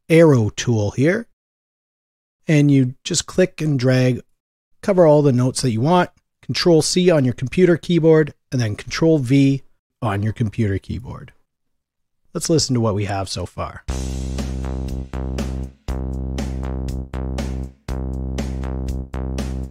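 Nothing here sounds wrong to me; the audio runs along without a single dropout, glitch or other technical problem worth pointing out.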